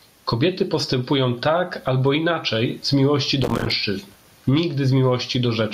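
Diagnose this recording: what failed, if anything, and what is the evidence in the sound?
Gain pumping throughout: the background swells in the gaps and ducks roughly 15 dB under each loud sound, likely from excessive mic gain driving a fast call-processing limiter.

Processor overload crackle, 3.42 to 3.72 s: a gritty burst of tiny silent dropouts, consistent with dozens of missed driver buffers of around 5 ms each.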